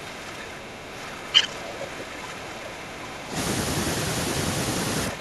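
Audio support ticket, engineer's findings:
Level dips up to about 15 dB, 0.0–3.36 s; shorter dip of about 10 dB at 5.1 s to end. Likely speech suppressed in double talk: echo canceller attenuating near-end speech while the far end talks.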